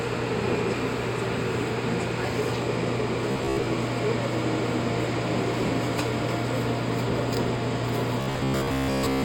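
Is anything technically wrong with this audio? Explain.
Yes. There is robotic sound from repeated short buffers from 3.31 to 3.66 s and from 8.21 to 9.24 s. The sound turns into a rigid, metallic buzz at about 67 Hz, likely because a roughly 15 ms stretch is looped while most of the real audio is skipped. A spectrogram would show a comb of harmonics spaced about 67 Hz apart, and the waveform would show identical repeating cycles.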